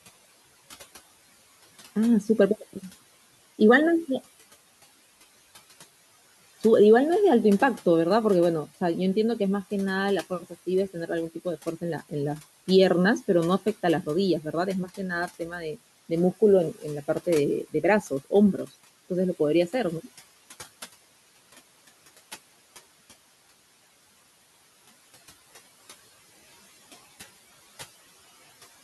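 From 15.27 to 15.76 s the speech is cut by the noise suppressor. With room noise sitting about 21 dB below the speech, the suppressor misjudged part of the speech as background and pulled it down with the noise, by about 11 dB at the deepest point. Roughly a fifth of a second of the sound in that span is affected, and the attenuated parts come across as swallowed and faint, as if briefly turned away from the microphone.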